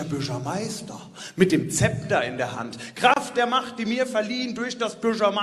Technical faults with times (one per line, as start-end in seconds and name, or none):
3.14-3.16 gap between stream segments